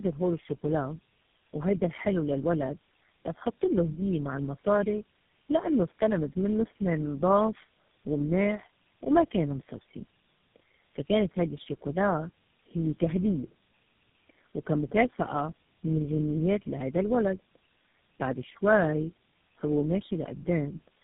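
From start to finish the speech carries tandem speech coding: it has passed through about four low-rate speech codecs in a row, with the sound fully decoded and re-encoded at each hand-off, so every coder models the previous one's errors. The result is rough, muffled and warbly, with nothing above 3.6 kHz. A single low-bitrate codec would sound thin but steady; here the artefacts stack, giving a compounded, smeared graininess whose character fits a chain such as GSM, AMR and G.729.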